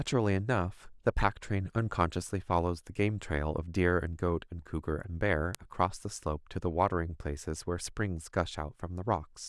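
A bit error spike at 5.55 s: one flipped bit throws a single sample to about -12 dBFS and straight back, giving one sharp, broadband tick unrelated to the speech.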